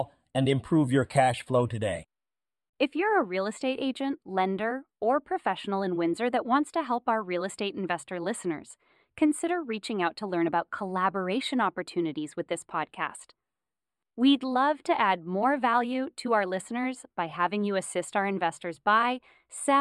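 It's a speech recording with channel delay (comb filtering) the whole way through: one side runs only a few samples late, about 0.07 ms, so the mono sum cancels around 7 kHz and sounds hollow or phasey.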